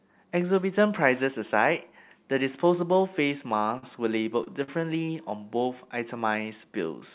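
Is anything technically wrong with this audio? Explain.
Yes, there are three short stalls from late packets, at 3.78–3.84 s, 4.44–4.47 s and 4.63–4.79 s. Each time a packet showed up late, the jitter buffer ran dry and the receiver held the last sound for roughly 30 to 45 ms before carrying on, so you get a brief smeared, buzzy hang with nothing actually lost. All this sits on a narrowband call path with nothing above 4 kHz, which fits G.711 at 64 kbps.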